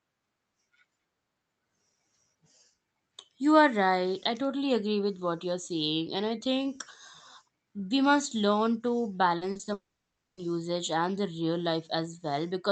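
From 9.37 to 9.69 s the speech turns choppy. This is repeated packet loss, the robotic-sound kind. Four short holes open in the stream, the longest about 40 ms. Each one is patched by stretching the sound just before it. Together the patches fill 120 ms, about 37 percent of that span. The repeated copying gives the choppy texture, and pieces of the speech are simply gone.

At 9.73 s a long network dropout begins and lasts to 10.39 s. About 640 ms of audio never arrives. The receiver extends the last sound briefly as a fading buzz. After that, roughly 570 ms is near-silence. The speech then resumes further on, with the missing stretch skipped. A lost connection is the likely cause. The gap sits right after the choppy patch, so the two run together as one damaged moment.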